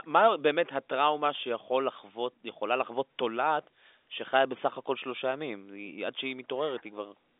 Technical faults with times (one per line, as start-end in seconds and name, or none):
none